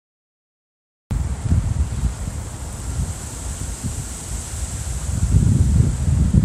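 For the first 1.11 s there is nothing but dead digital silence, and then at 1.11 s the audio snaps in already in progress, with no attack and no fade-in, as if the sound had been running for a while before we joined it. This is a cut-off start: capture or playback of the stream began late, so the opening of the event was never recorded and the audio resumes abruptly partway through.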